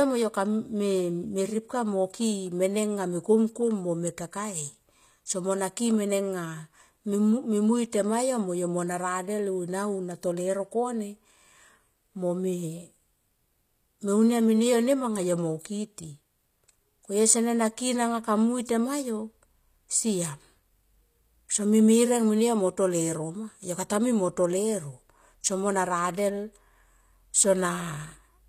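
Throughout the speech, the treble sounds bright but false. S sounds come out gritty and lispy, with a metallic edge. This is likely HE-AAC compression at a low bitrate, near 24 kbps. Upper bands are rebuilt from copied lower ones, so harmonics don't line up.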